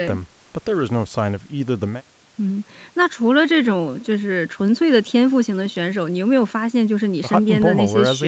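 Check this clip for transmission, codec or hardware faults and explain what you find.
Nothing stood out on listening to this speech, which carries the usual call-path band limit with nothing above 8 kHz.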